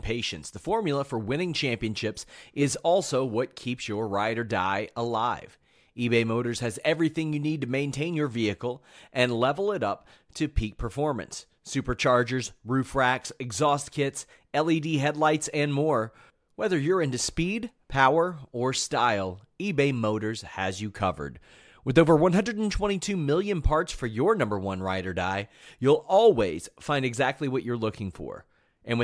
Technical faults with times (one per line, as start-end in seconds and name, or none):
none